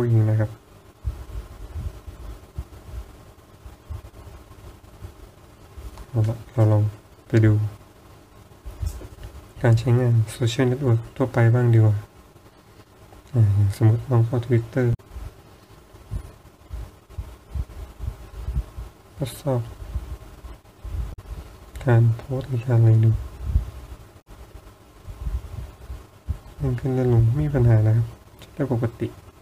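At 14.90–15.00 s, 21.10–21.19 s and 24.18–24.27 s, damaged data in the compressed stream makes the decoder misread frames and lose sync, giving brief glitches. Each shows as a roughly 0.1 s disruption on the spectrogram and waveform.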